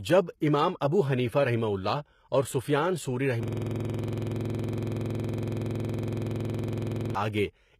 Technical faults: HE-AAC compression; pre-echo; system hang loop

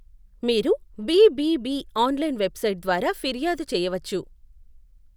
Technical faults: none

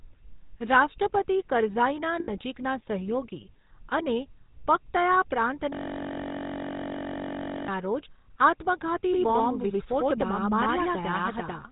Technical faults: GSM full-rate codec; lost GSM frames; doubled audio track

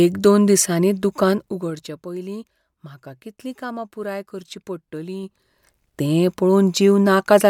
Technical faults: zipper noise

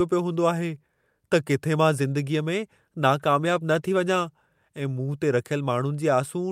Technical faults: call bitrate drop

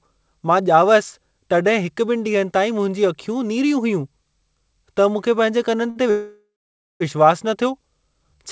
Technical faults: short stall from a late packet; call audio freeze

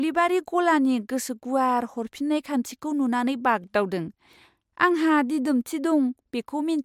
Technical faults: none

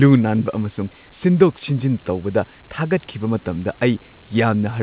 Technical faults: none

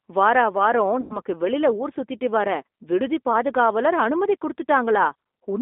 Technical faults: G.729 codec; VoIP packet loss concealed by the speech codec

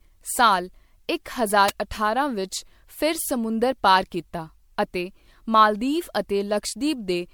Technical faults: generation loss; electrical switching spike

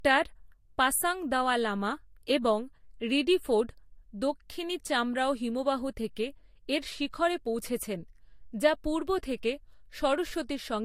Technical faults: transcoding between lossy codecs

